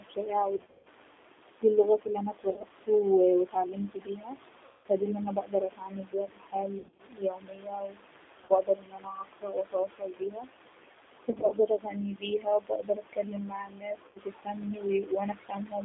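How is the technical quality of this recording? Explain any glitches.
The recording has poor technical quality. The speech is narrowband and coded throughout, a noise suppressor keeps pumping and swallowing parts of the speech, and seven packet-loss dropouts break it up.

G.729 codec, throughout: The speech occupies only about 300 Hz to 3.6 kHz, and its rough, slightly synthetic texture fits an 8 kbit/s G.729 link. That codec rebuilds each 10 ms slice from a vocal-tract filter, a pitch predictor and a handful of pulses rather than the actual waveform. The damage is plainly audible as a rough, synthetic edge on the speech.

Noise suppressor artifacts, throughout: The suppressor pushes what it judges to be steady background down by about 18 dB, deciding afresh in each short frame. Because that decision flips constantly, the room noise drops away in pauses and swells back under the speech.

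Speech cut by the noise suppressor, from 0.0 to 2.9 s, 3.45 to 5.04 s, 5.36 to 10.9 s and 11.13 to 15.85 s: Over roughly a dozen seconds in total, the suppressor mistakes quieter speech for background and turns it down with the noise, by as much as about 19 dB. Soft consonants, word endings and quieter stretches sound swallowed or faint, as though the talker keeps trailing off.

VoIP packet loss concealed by the speech codec, at 0.58 to 0.88 s, 2.50 to 2.65 s, 4.65 to 4.86 s, 6.79 to 7.01 s, 8.45 to 8.53 s, 11.30 to 11.53 s and 14.08 to 14.18 s: Chunks of the stream never arrived, from 40 ms up to 200 ms, sometimes scattered in short runs. The decoder covers each gap by repeating its last pitch and filter while fading the gain. Each gap therefore becomes a smeared, buzzy tone or coloured noise that dies away, and the speech stays weak or distorted briefly after real packets resume, because every frame builds on the previous one.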